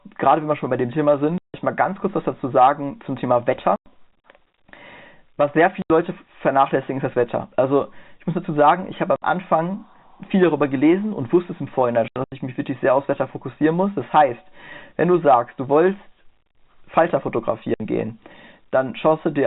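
At 1.38 to 1.54 s, 3.76 to 3.86 s, 5.82 to 5.90 s, 9.16 to 9.22 s, 12.08 to 12.32 s and 17.74 to 17.80 s, the speech drops into dead silence with hard edges. This is packet loss filled with silence. Every gap is a multiple of 20 ms, which fits 20 ms packets. At 12.08 s the loss is broken into short holes, the longest 80 ms. Concealment would fill the holes with smeared or repeated sound. Here they are empty, cut hard into the band-limited telephone audio.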